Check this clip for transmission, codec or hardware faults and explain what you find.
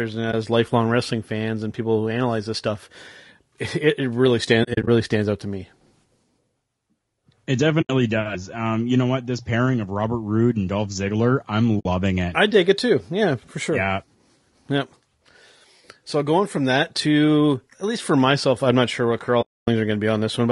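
Two faults are present: low-delay AAC coding throughout the speech, and five places where AAC frames were lost and muted.

Low-delay AAC compression runs for the whole clip. The audio was likely squeezed through a low-delay codec of the AAC-ELD kind at a rate that sounds near 32 kbps. With so few bits for each frame's spectral lines, the codec damage is plainly audible: the speech turns rough and grainy, noise fills the gaps between harmonics, and the top band sounds lowered or synthetic.

AAC frame loss with muting appears five times. When a frame goes missing, the decoder zeroes its spectrum, and the overlapping windows fade the sound out and back in, so each gap has soft edges. Each lost frame removes roughly 20 ms.

At 0.31 s, just before "lifelong wrestling fans and", a 20 ms dip appears.

From 4.63 to 4.88 s, between "it it really" and "stands out to me", about 120 ms drops out in pieces scattered over 240 ms. 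The longest run is about 40 ms.

At 7.81 to 7.90 s there is an 80 ms hole.

At 11.79 to 11.86 s there is a 60 ms hole.

At 19.41 to 19.68 s, right after "I'm not sure what", a 260 ms hole opens. This is the longest gap.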